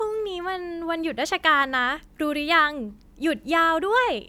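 Nothing in this speech recording stood out as a problem on listening.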